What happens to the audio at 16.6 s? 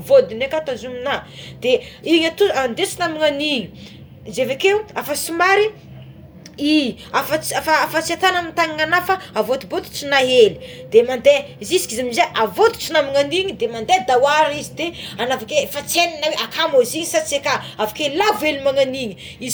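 Nothing goes wrong at 16.6 s: the speech carries on intact through that moment, with no dropout, click, distortion or other fault to be heard there.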